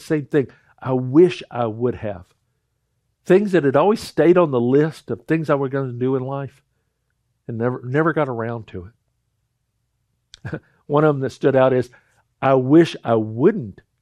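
No faults can be heard anywhere in the recording, and nothing in it calls for a fix.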